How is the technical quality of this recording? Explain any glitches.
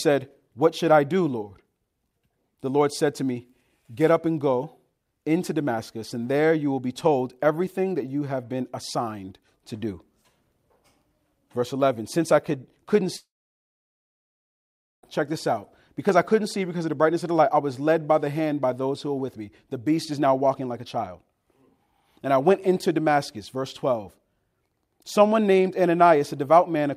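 There's one clear glitch in this speech recording. From about 13.16 s to 15.04 s the audio drops out for nearly two seconds, which sounds like a long network dropout, likely from a stall in the stream. The last sound before the gap gets smeared on briefly as a fading buzz or hiss, then about 1.8 s of silence follows. The talker comes back at "check this out", with everything in between gone.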